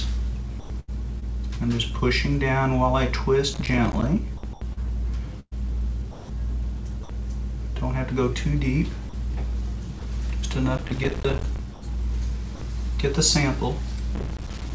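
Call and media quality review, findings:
Sound chopped by the voice detector, 0.60–1.23 s, 4.37–7.09 s, 11.73–12.61 s: choppy edges, holes filled with comfort noise. Likely sender VAD toggling transmission repeatedly.

Processor overload crackle, 3.54–4.06 s, 10.78–11.59 s, 14.15–14.70 s: gritty tearing from dozens of missed deadlines on buffers of around 5 ms, each leaving a hard-edged silent gap.

Sound dropped by the voice detector, 9.09–9.13 s, 9.99–10.01 s, 14.47–14.49 s: brief losses filled with steady comfort noise. The detector likely took quiet sound for background and stopped sending. The G.722 call path shows nothing above 8 kHz.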